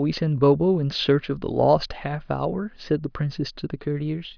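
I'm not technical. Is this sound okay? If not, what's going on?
Yes, no faults to hear.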